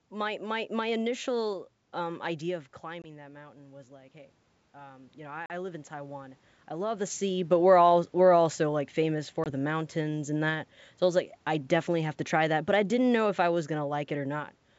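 From 2.05 s to 7.24 s the automatic gain control, sensing an input that had dropped by about 12 dB as the talker moved back around 2.5 s, kept raising its gain by about 10 dB in total. The result is a slow swell in which the voice and the room noise climb together over several seconds, with the room noise audibly lifting along with the speech.

Packet loss on the ADPCM call cuts hard-edged gaps at 3.02 s (20 ms, about one packet), 5.46 s (40 ms, about two packets) and 9.44 s (20 ms, one packet). The lost audio is replaced by silence, so each gap is silent with abrupt edges, and meanwhile the decoder's adaptive predictor and step size drift away from the sender's. When the speech comes back, it briefly has a click, some distortion or the wrong level until the decoder settles within tens of milliseconds.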